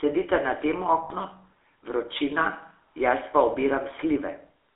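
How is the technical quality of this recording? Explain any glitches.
Technical quality is poor. The speech has been through a low-rate phone codec the whole way, with one short dropout near the start.

The GSM full-rate codec runs throughout, with plainly audible damage. It rebuilds the voice from a vocal-tract model fed with coarse pulse excitation, which fits a 13 kbps GSM stream. That gives the speech a buzzy, gravelly edge, and the band is squeezed to roughly 300 Hz to 3.5 kHz.

The lost GSM frames come from 1.04 to 1.12 s, right after "na tem". The decoder held onto the last good frame and kept repeating it for about 60 ms, which points to three dropped frames. You hear a brief, rough metallic ring there.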